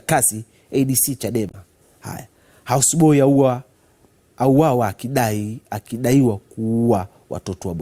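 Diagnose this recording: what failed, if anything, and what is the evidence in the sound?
The failure sits at the codec stage: damaged data in a compressed stream, heard as a brief disturbance from 1.49 to 1.55 s, about 56 ms long. Corrupted bytes there made the decoder misread its frames and lose sync until it found a valid frame header again, so that stretch came out as garbage. On a spectrogram it shows as a short vertical smear of broadband or oddly banded energy unrelated to the surrounding sound.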